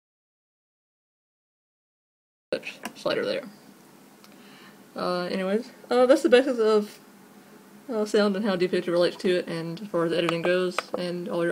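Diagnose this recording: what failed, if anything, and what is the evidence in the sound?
An audio dropout to silence runs from the start to 2.53 s: dead silence with no room tone, then sound enters mid-flow, likely lost input at the device or link.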